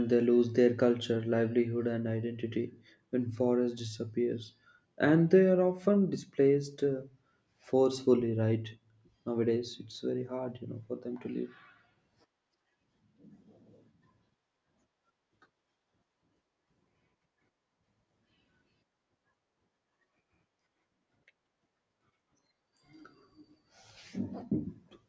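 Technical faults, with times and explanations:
No technical faults can be heard in this speech.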